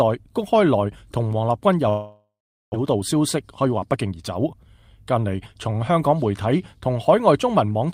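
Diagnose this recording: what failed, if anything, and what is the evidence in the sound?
Network stage: at 1.89 s the sound turns into a fading, buzzy continuation of its last moment, followed by about 0.41 s of silence until audio resumes at 2.76 s, with roughly 0.6 s never heard. This is likely a long network dropout, concealed by the receiver.

Buffer stage: from 2.85 s to 5.19 s the audio runs about 9% fast at unchanged pitch, a jitter buffer speed-up. With excess audio queued after the outage, the receiver repeatedly cut short pitch-period pieces, discarding around a fifth of a second to bring the delay back down.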